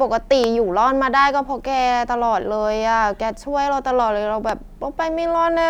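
A sudden voltage pulse, likely from a plug, switch or static discharge, entered the signal twice, each a single loud pop from 0.44 to 0.46 s and from 4.49 to 4.51 s, peaking around 15 dB above the speech, which continues underneath.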